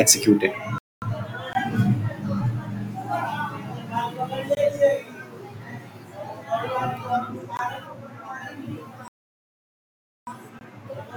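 A speech recording that twice cuts abruptly to silence and then picks up exactly where it left off, with nothing missing. These are rebuffering stalls: the player exhausted its downloaded audio and waited for more, adding about 0.24 s at 0.78–1.02 s and about 1.19 s at 9.08–10.27 s. Short holes of 20 ms also interrupt the speech at 1.53–1.55 s, 4.55–4.57 s, 7.57–7.59 s and 10.59–10.61 s, spaced every 3 s. This is a gap between chunks: the audio was delivered in 3-second pieces with silence left at each join, likely from codec padding or a player starting each chunk late.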